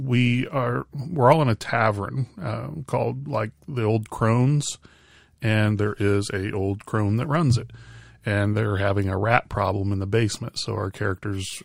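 No technical faults can be heard anywhere in this recording; the signal holds steady and intact across its full duration.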